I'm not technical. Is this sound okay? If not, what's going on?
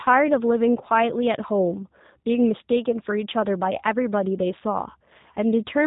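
No. The whole recording went through the G.729 codec, a phone-call compressor that rebuilds speech roughly and drops everything above 3.8 kHz, so it sounds muffled and synthetic.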